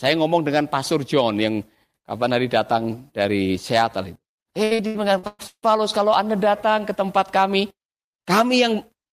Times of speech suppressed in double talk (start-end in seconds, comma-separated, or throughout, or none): none